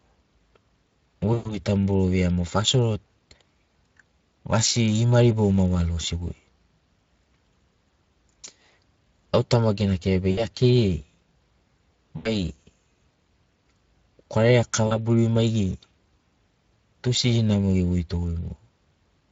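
Speech runs through the Speex codec for its whole length, with plainly audible coding damage that sounds hoarse and noisy, as at a bitrate around 20 kbps. On a spectrogram the harmonics look smeared and grainy, with noise filling the gaps between them. VoIP packet loss concealed by the speech codec breaks in four times: 1.33–1.58 s (120 ms lost), 10.31–10.46 s (60 ms), 12.17–12.34 s (80 ms) and 14.87–14.96 s (40 ms). In each, the decoder stretches the last sound into a fading buzz or coloured noise. This shows as a shrinking waveform envelope before normal detail returns.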